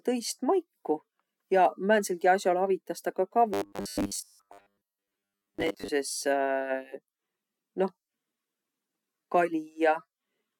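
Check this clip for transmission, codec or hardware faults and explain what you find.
One fault is present. Robotic sound from repeated short buffers, 3.54 to 5.89 s, just after "as'al avitas ta ka": audio likely arrived too seldom, so a 10 ms slice replays through most of the span, leaving a rigid, metallic 100 Hz buzz.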